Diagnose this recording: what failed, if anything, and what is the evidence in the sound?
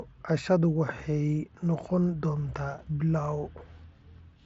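Nothing failed in this recording.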